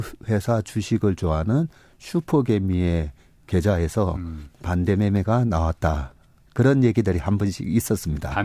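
No technical faults can be heard anywhere in this speech recording. There is nothing to mark at any point in the timeline.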